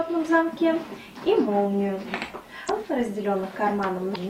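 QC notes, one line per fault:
2.65–2.70 s and 4.12–4.17 s, damaged data in a compressed stream: two brief blips of about 40 to 50 ms each, breaking into the sound as a chirp, squawk, click or short hole. Part of the compressed stream is corrupted here, so the decoder misreads or discards the affected frames, loses sync, and hunts for the next valid frame header before normal playback resumes.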